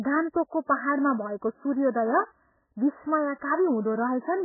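Speech runs through the whole clip with nothing above about 2.1 kHz and a heavy watery, swirling texture, the likely result of MP3 compression at a rate near 8 kbps. Unlike a plain low-pass filter, the surviving band also warbles as weak components flicker between frames, and consonant onsets smear.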